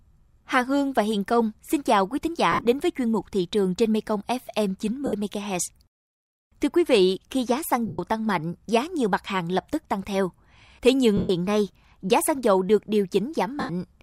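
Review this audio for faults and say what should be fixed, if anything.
Lost LE Audio frames cause dropouts at 2.52 s (after "xin chào quý thính"), 5.06, 7.87, 11.17 and 13.60 s, each 70 to 120 ms. The LC3 decoder repeats the last spectrum with random signs, smearing speech into fading noise. Strengthening the Bluetooth link against interference would prevent it.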